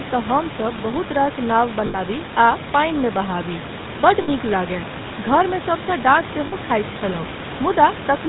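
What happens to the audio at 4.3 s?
Lost GSM frames end right there: from 4.22 to 4.29 s, a gap of about 60 ms, consistent with three 20 ms frames, the decoder reuses the last good frame's parameters. The result is a brief rough, metallic ring just before "लागय घरमे".

Underneath, the GSM full-rate codec is plainly audible. Its pulse-driven vocal-tract model, rebuilt from sparse excitation at what sounds like 13 kbps, leaves the speech buzzy and gravelly, with nothing above 4 kHz.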